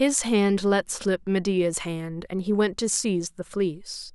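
Nothing stood out on listening to this speech recording.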